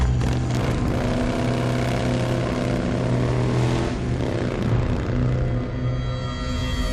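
No technical faults can be heard anywhere in the clip. Nothing in the audio stands out as a problem at any point.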